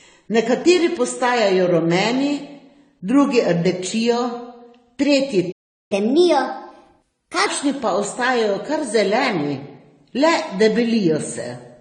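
Throughout the speech, the top of the spectrum is missing, and smeared, swirly high-frequency artefacts sit alongside a second layer of blocky, metallic coding noise. This likely comes from transcoding between lossy codecs, with a Vorbis stage near 47 kbit/s followed by AAC-LC near 32 kbit/s. On a spectrogram, the energy ends at a hard ceiling, and the region beneath it is patchy.

From 5.51 to 5.92 s the sound cuts out for about 0.39 s, which is a playback stall. The player likely ran out of data or was blocked. The waveform shows a flat line of silence, and the spectrogram shows a clean vertical blank gap before the sound resumes.

Immediately afterwards, from 5.92 to 7.46 s, the audio plays at 1.25 times normal speed. Pitch rises by roughly four semitones as the player catches up at higher speed on its backlog. The spectrogram shows the harmonics shifted upward and compressed in time, and they return to normal after 7.46 s.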